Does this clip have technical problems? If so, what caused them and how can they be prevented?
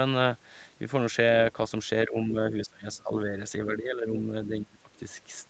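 Yes. The speech dips repeatedly at 2.07–2.36, 2.52–3.36, 3.65–4.27 and 4.49–4.91 s, by roughly 10 to 25 dB, the deepest near the end. This pattern is likely speech suppressed in double talk: the echo canceller mistook overlapping far-end audio for echo and attenuated the talker. Prevention: use headsets or better acoustic isolation, and tune the canceller's double-talk detection.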